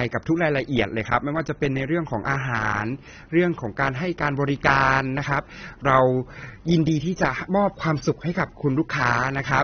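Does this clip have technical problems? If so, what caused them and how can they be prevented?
Yes. The speech is muffled and smeared throughout, with nothing above about 6.3 kHz and a watery, fizzy texture on sibilants and held vowels. This is likely AAC compression, which fits AAC-LC at a bitrate around 24 kbps. At that rate the encoder cannot afford the upper band, so it lowers its cut-off, and the bits left for the remaining frequency lines are spread so thinly that detail breaks up into audible artefacts. Encoding at 64 kbps or more for mono speech, or keeping a lossless copy, would prevent this.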